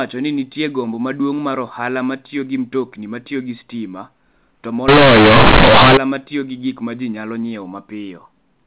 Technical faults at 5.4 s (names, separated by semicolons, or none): companded audio read as linear